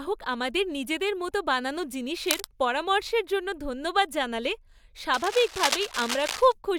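Cable scratch noise at 2.24–2.45 s and 5.13–6.52 s: dense, uneven scratching bursts sit only about 5 dB under the speech, likely from a worn cable or connector being moved.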